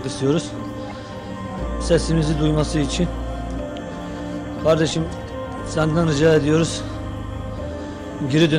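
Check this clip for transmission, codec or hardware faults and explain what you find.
Hard clipping appears in five places: 1.91 to 1.96 s, 2.47 to 2.61 s, 4.68 to 4.84 s, 5.80 to 6.62 s, and 8.37 to 8.56 s. In each, the signal drives about 3 to 4 dB past what a stage in the chain can pass, so the peaks are sheared flat. Those squared-off tops generate high-order harmonics, heard as a brittle crackle on the loudest moments. The longest stretch, near 6 s, lasts about 0.8 s.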